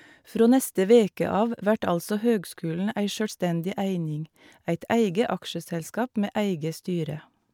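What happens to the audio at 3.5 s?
Nothing goes wrong at 3.5 s; the speech runs on intact there, with no dropout, click or distortion at that moment.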